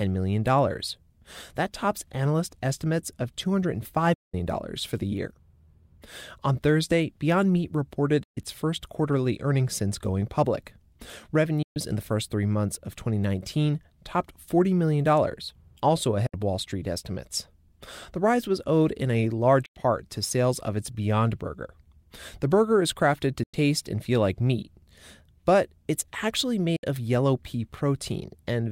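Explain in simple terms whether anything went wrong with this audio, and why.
The speech keeps dropping out. This is a digital broadcast dropout. The receiver lost good data and muted itself until clean data returned. Each time, the sound fades out very quickly and goes silent. The gaps come at 4.14 s, 8.23 s, 11.62 s, 16.26 s, 19.66 s, 23.43 s and 26.76 s. The longest lasts about 0.19 s. The shortest last about 0.06 s. Whatever was said during those gaps is gone.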